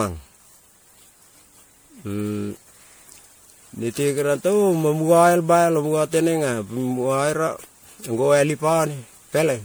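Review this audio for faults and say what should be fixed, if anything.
Throughout the speech, the sound is swirly, smeared and hollow, with blurred consonant attacks, more degraded than a 96 kbit/s MP3 alone would leave it. The likely cause is generation loss: repeated lossy MP3 re-encoding, roughly seven passes, each adding quantisation noise and spectral holes on a shifted frame grid. To prevent it, keep a lossless master and encode to MP3 only once, as the final step.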